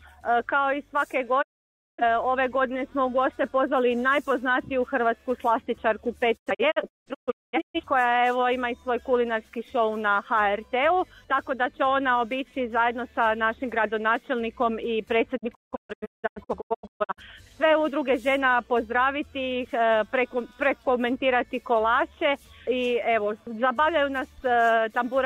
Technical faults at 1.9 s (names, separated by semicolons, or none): digital broadcast dropout